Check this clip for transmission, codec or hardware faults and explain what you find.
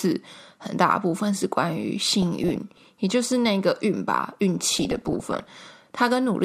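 Two bursts of DAB burbling sit on the speech. The first runs from 1.99 to 2.80 s, the second from 4.71 to 5.48 s. Weak reception lets bit errors slip past error correction into the MP2 data. Corrupted samples put short blips of noise in single sub-bands, and corrupted scale factors make sub-bands leap in level for up to a frame. The result is burbling over the speech. The second burst sounds denser, which points to roughly one percent bit errors against about 0.4 percent in the first.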